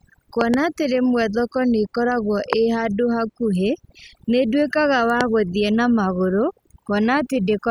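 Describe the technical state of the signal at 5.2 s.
At 5.21 to 5.23 s a loud pop, likely from a switch or static pulse, jumps roughly 20 dB above the speech; the waveform shows a single sharp spike, the spectrogram a thin full-height vertical stripe. Overdone noise removal runs beneath it, gating weak frequency bands, with sparse twinkling specks in an otherwise blank spectrogram background.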